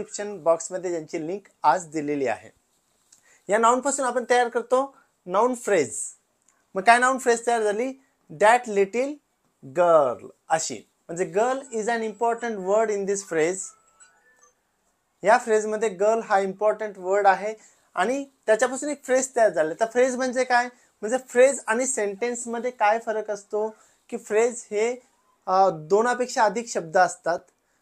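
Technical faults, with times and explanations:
Nothing technical stands out here; no faults turn up anywhere in the recording.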